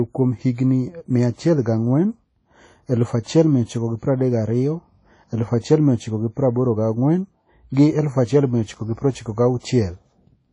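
Throughout the speech, WMA compression is likely: the sound rings and washes, with a hiss that swells and fades with the signal, and nothing is heard above 10.1 kHz. This fits a low bitrate near 32 kbps, and the smeared, breathing noise sets it apart from a clean low-pass filter.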